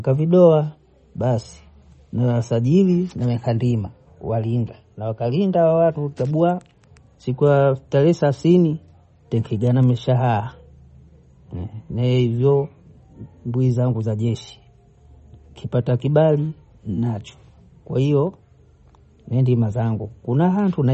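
Speech throughout, with nothing above 8.3 kHz and plainly audible watery, swirly smearing, likely MP3 compression at a low bitrate somewhere around 33 kbps.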